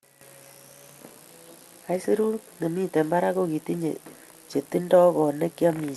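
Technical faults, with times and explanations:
Careful listening turned up nothing in this speech recording that stood out as a technical fault.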